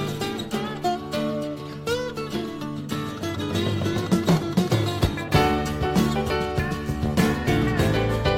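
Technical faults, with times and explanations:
No technical faults found in the audio.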